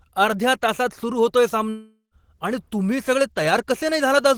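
At 1.69 s, just after "सुरु होतोय", the speech cuts out. The last sound smears into a fading buzz, then about 0.12 s of silence follows. Speech returns at 2.14 s with "आणि तुम्ही सगळे", about 0.42 s lost. This is likely a long network dropout.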